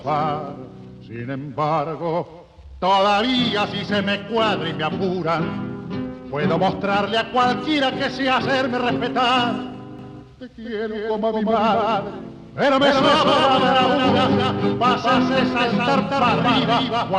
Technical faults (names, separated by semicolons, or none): doubled audio track